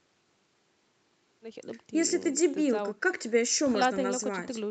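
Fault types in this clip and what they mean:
No faults present; the speech shows only the expected ceiling near 8 kHz from the call microphone processing and the Opus call path.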